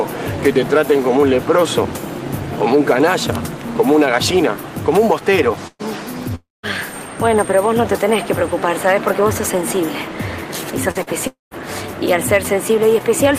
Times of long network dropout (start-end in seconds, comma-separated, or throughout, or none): 6.35-6.66, 11.27-11.54